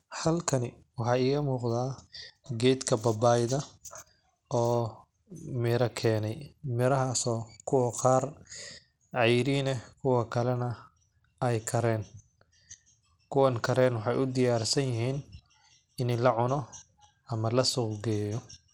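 From start to finish the speech carries Bluetooth SBC compression damage, likely from a low bit pool, with a data rate around 96 kbps. The top sub-bands starve of bits, so treble flickers and drops out, while coarse quantisation leaves a gritty, aliased edge over the voice.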